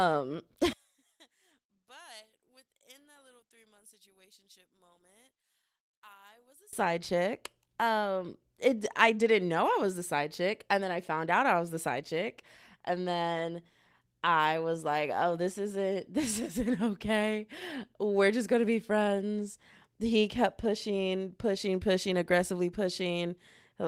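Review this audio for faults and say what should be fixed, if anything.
From 0.73 to 6.73 s, one stereo channel was most likely polarity-inverted, so its waveform runs opposite to the other. When the two channels are summed to mono, the speech common to both cancels, and the level during this stretch drops by about 31 dB. The centred speech all but disappears, leaving only whatever differs between the channels, until normal polarity returns at 6.73 s. Checking polarity on every channel, and monitoring a mono fold-down before delivery, would catch this inversion.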